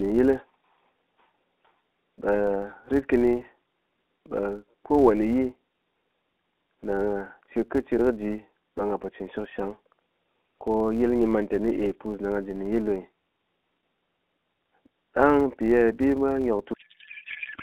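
From the first second to the end, a steady buzz sits under the speech. This is a filter restarted on every block. It drops its memory at each block boundary and starts again from silence, so every block opens with a small transient. The transients repeat at 172 Hz, which fits a 256-sample block. The buzz gets louder and softer with the speech. It fades in pauses.

At 16.74 s, right after "ye bimwa", the speech turns into garbled noise and warble that barely tracks it. This is a codec payload misread. The audio sounds like an octet-aligned AMR stream being read as bandwidth-efficient. The decoder finds frames that look valid, but every field sits in the wrong place. Until then the light AMR-NB sound, limited to roughly 250 Hz to 3.7 kHz, is intact. The garbling runs to the end at 17.62 s.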